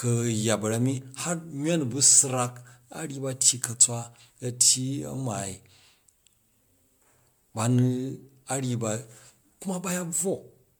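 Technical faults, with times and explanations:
Throughout: generation loss. The speech has a swirly, hollow quality and consonant attacks come out smeared, more than a single MP3 pass at around 128 kbit/s would leave. That points to the audio likely being decoded and re-encoded about five times. Each pass requantises on a shifted frame grid, so the noise and spectral holes pile up instead of staying put. The top end still reaches about 20.1 kHz.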